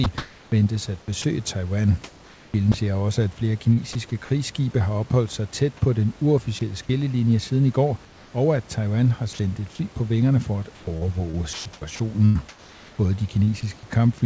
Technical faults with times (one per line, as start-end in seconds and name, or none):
0.04-2.85 sound chopped by the voice detector
3.73-3.79 short concealed packet loss
6.59-6.61 sound dropped by the voice detector
8.05-8.33 comfort noise in place of the background
9.33-9.39 sound dropped by the voice detector
10.75-13.49 sound chopped by the voice detector